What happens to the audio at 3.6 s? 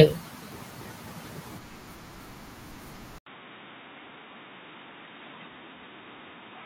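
At 3.6 s the speech sounds dull and boxy, with nothing above 3.8 kHz, and a faint new background noise sits well below it while the loudness stays about the same. The change begins at 3.18 s, with an 80 ms gap of silence at the switch, and lasts to the end of the clip. This is likely an input switched to a poorer device, such as another microphone or a headset's call profile, whose narrower band and own noise replace the original pickup.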